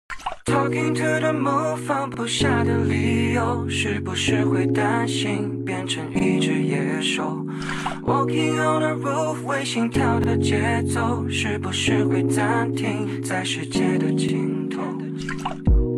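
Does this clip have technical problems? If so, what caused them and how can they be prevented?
Yes. A short stutter recurs every 4 s, at 2.14, 6.19, 10.24 and 14.29 s. These are overlapping chunks: each 4 s block begins 48 ms before the previous one ends, so that slice plays twice. Trimming the overlap at each join prevents it.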